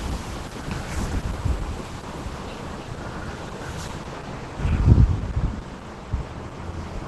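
Throughout, the sound is muffled and hoarse, with nothing above 12 kHz. This is likely Opus compression at a low bitrate, around 16 kbps, in its hybrid mode.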